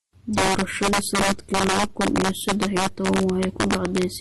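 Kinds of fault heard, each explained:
Integer overflow: throughout, peaks driven about 5 dB past full scale wrap to the opposite sign, so a few percent of samples become violent cracks on loud speech.
Transcoding between lossy codecs: throughout, nothing above 12.1 kHz and mixed, layered artefacts, likely from speech passing through MP3 and then Opus, consistent with low bitrates.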